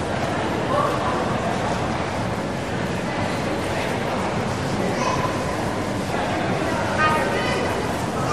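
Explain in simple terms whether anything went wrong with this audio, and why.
Nothing went wrong: no audible faults anywhere in the recording, so there is nothing to explain or fix.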